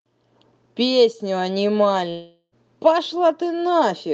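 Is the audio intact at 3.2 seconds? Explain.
Yes, at 3.2 seconds the speech is intact, with no dropout, glitch or other fault at that moment.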